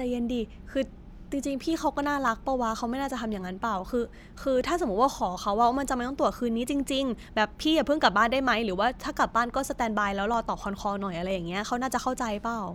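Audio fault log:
2.28 s, 10.34 s and 11.31 s: three single sharp clicks in the speech, likely dropped samples, each a fraction of a millisecond lost so the waveform leaps abruptly to a later value. Each shows as a thin vertical line spanning the spectrogram and a step in the waveform.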